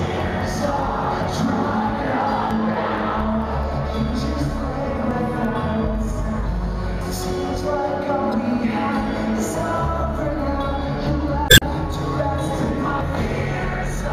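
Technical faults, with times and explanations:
0.79, 2.51, 5.11, 7.01, 9.38 and 13.01 s: dropped buffer (overrun). Each is a jump with the sound lurching forward, roughly 50 ms missing, about 100 ms at 5.11 and 13.01 s. The likely cause is samples overwritten before being read, so the surviving edges butt together.
8.30 to 8.32 s and 11.48 to 11.63 s: damaged data in a compressed stream. Corrupted frames make the decoder misread and hunt for the next valid header, giving a brief glitch. The second event also inserts 50 ms of extra time, stretching that stretch slightly.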